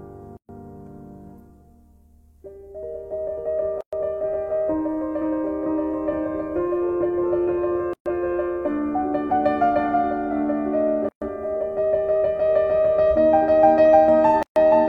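At 0.37 s the sound drops out for about 119 ms, then resumes where it left off. The same gap at a join of encoded pieces recurs at 3.81 s (119 ms), 7.93 s (125 ms), 11.09 s (129 ms) and 14.43 s (133 ms). Each piece was encoded separately and joined untrimmed. The encoder's start-up delay and last-frame padding stay in as silence. The edges are smeared by the codec.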